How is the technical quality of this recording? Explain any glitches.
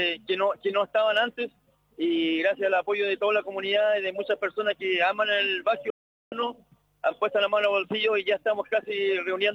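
There is one clear fault, a digital broadcast dropout from 5.9 to 6.33 s. The sound fades out within about 3 ms and stays silent for roughly 0.42 s, fitting a run of frames that failed their checks. The receiver muted until valid frames resumed, so that stretch of programme is gone.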